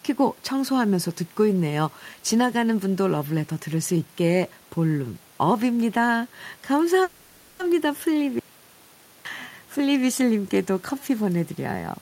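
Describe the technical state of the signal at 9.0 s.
At 9.0 s the signal is dead: it sits inside an audio dropout to silence running from 8.39 to 9.25 s, so roughly 0.86 s of speech is simply missing. The input was most likely lost briefly, a link or device glitch, while the recorder kept writing silence. You hear the speech chop off mid-flow and snap back, and even the faint room noise, about 32 dB under the speech, vanishes inside the gap.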